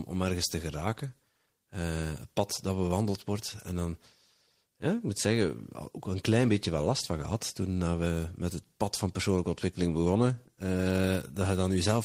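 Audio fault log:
No faults heard anywhere in this speech recording.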